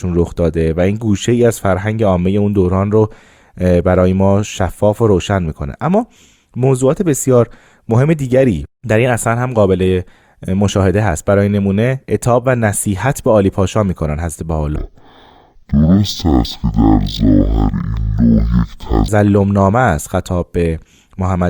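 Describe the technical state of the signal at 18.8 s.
At 18.8 s the signal is inside a stereo read as mono fault running from 14.76 to 19.08 s. Interleaved left and right samples are being read as one channel, so the speech plays at half speed and an octave (12 semitones) low.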